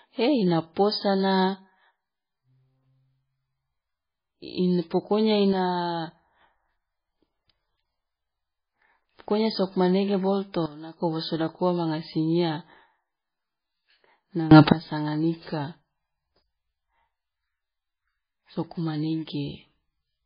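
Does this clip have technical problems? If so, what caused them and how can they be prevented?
Yes. Throughout, this speech has nothing above 5 kHz and a watery, swirling texture with smeared consonant attacks. That is heavy MP3 compression, likely from a very low bitrate of around 13 kbps. Unlike a plain low-pass filter, it also makes weak detail flicker between frames. Encoding at a higher bitrate prevents it.

Sudden gain jumps occur from 5.53 to 6.41 s (down about 6 dB), from 10.66 to 11.01 s (down about 15 dB, just after "pokonya sokmanege boloto" and before "wo sodak ua manga"), and from 14.51 to 14.72 s (up about 21 dB). The likely cause is digital gain switched without a ramp. Voice and background noise step together, which sets this apart from a speaker moving away. Ramping every gain change prevents it.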